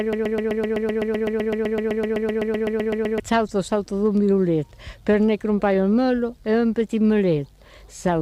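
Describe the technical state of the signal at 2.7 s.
At 2.7 s the signal is inside a broken-record loop, already running at the start and ending at 3.20 s: a 127 ms fragment repeats back to back, likely from a stalled player or stream.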